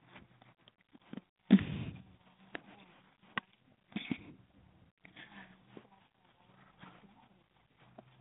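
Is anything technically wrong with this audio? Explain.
Yes. Throughout the speech, the signal passes through G.726 ADPCM coding at a low rate. The codec sends only a few bits per sample to describe how each sample differs from an adaptive prediction, so the quantisation error is coarse and grows as the speech level rises. The result is a harsh, rasping hiss that follows the speech level, which fits 24 kbit/s. The band is confined to roughly 150 Hz to 3.5 kHz, with nothing above 3.8 kHz.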